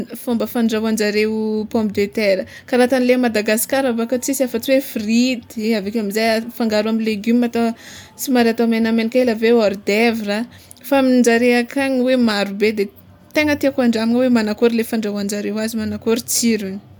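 Nothing in this speech recording stands out as a technical fault at any point, so there's nothing to walk through here.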